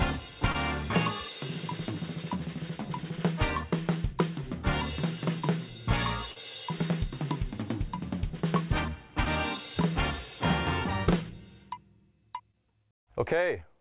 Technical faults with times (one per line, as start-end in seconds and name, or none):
0.52-0.56 short concealed packet loss
5.40-5.44 short concealed packet loss
6.32-6.38 short concealed packet loss
9.24-9.28 short concealed packet loss
12.52-12.55 short concealed packet loss